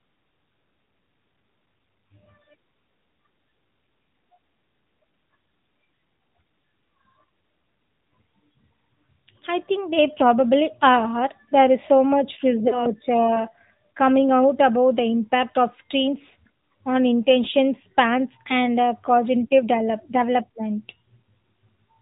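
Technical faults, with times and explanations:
Throughout: AMR narrowband mobile codec. The speech sounds boxed-in and buzzy, with nothing above 4 kHz. At 10.2 kbps the AMR-NB coder rebuilds the voice from a vocal-tract model and a few excitation pulses per 5 ms subframe, and that synthetic edge is plainly audible.
12.68–12.91 s and 16.28–16.31 s: lost AMR speech frames. The first gap, about 40 ms of missing audio that fits two consecutive 20 ms frames, gives a brief smeared warble and a rough recovery. The second, consistent with one missing frame, is a short dip. The decoder stood in for each lost frame by repeating the last good pitch and vocal-tract settings at reduced gain.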